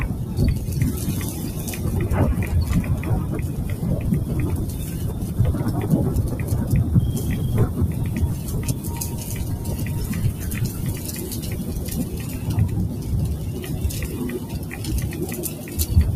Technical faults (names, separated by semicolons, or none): noise suppressor applied to music or sounds